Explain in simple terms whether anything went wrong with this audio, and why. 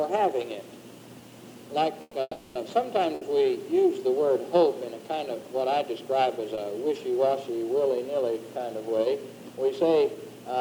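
Two brief call audio freezes break up the sound, from 2.01 to 2.15 s and again from 2.21 to 2.57 s. Each time, the last sound trails on as a fading buzz before a short silence, then the audio resumes where it stopped, likely because packets were held up in transit. These pauses are longer than a stall and end in true quiet.

Two smaller short stalls from a late packet follow, at 3.15 to 3.23 s and 6.55 to 6.59 s. A single sound is simply held slightly too long while one packet arrives late. Nothing goes quiet, and each lasts well under a tenth of a second.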